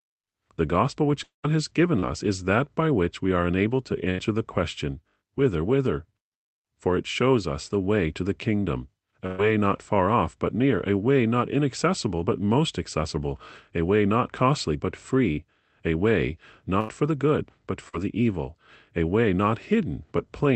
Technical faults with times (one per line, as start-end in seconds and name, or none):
1.23-1.45 long network dropout
1.99-2.04 short concealed packet loss
4.10-4.20 burst of packet loss
9.26-9.40 burst of packet loss
15.32-15.38 short concealed packet loss
16.80-16.90 burst of packet loss
17.88-17.95 short concealed packet loss